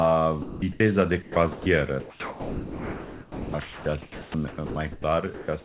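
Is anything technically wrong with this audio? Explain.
Yes. There are three kinds of fault, all audible as gaps or swaps in the speech and its background, heard through a narrowband call path with nothing above 4 kHz, which points to a G.711 mu-law codec at 64 kbps.

Sound dropped by the voice detector, at 0.42 to 0.62 s and at 5.34 to 5.48 s: the sender's detector likely mistook speech for background and stopped sending. About 200 ms of speech vanishes in the first case and about 70 ms in the second, replaced by steady synthetic noise until sending resumed.

Comfort noise in place of the background, from 0.42 to 0.8 s: with transmission paused, the receiver likely filled the silence with generated noise loosely matched to the room. For roughly 280 ms the real background gives way to a flat, featureless hiss before the genuine sound returns.

Sound chopped by the voice detector, at 1.22 to 1.66 s and across 2.0 to 5.04 s: the detector likely toggled repeatedly between sending and muting. 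Parts of the speech are replaced by comfort noise, most persistently over the long three-second stretch.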